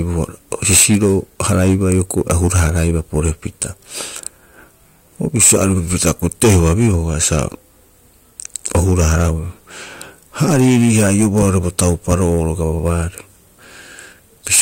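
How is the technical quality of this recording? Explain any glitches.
Harsh fuzz rides on every loud syllable from start to finish, the sound of hard clipping. The speech was driven about 22 dB past what a stage could pass, so a few percent of samples have their peaks sliced flat, spraying high harmonics across the spectrum.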